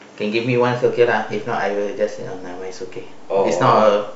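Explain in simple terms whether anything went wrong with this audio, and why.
A DC step hit at 0.86 s: the signal's zero line suddenly jumped and stayed shifted, causing one low thump while the speech continued unchanged.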